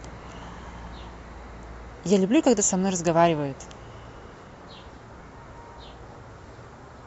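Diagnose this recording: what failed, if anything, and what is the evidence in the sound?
Nothing failed; no stage shows an audible fault.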